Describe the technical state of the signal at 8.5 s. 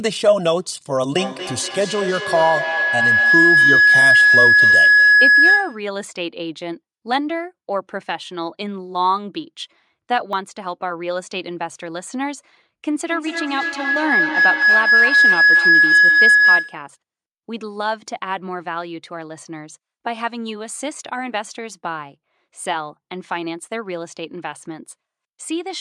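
At 8.5 s the speech signal is intact, with no dropout, clipping, glitch or other technical fault at that point.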